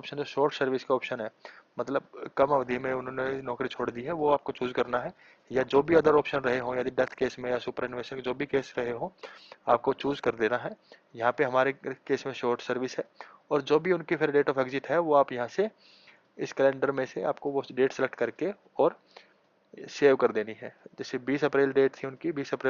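An adaptive stream at a lower bitrate switched to a thinner version of the audio from 2.42 s to 10.42 s, which fits a drop from 64 to 16 kbit/s Opus. Codec artefacts rise, and quality changes abruptly at both ends without any gap.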